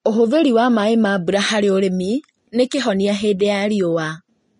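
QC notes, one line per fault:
Throughout, Vorbis compression: the speech was likely encoded with low-quality Vorbis at a rate that fits about 33 kbps. Nothing survives above 10.6 kHz, and the remaining treble is coarsely quantised into noise, so sibilants sound hissy and grainy and consonant attacks blur.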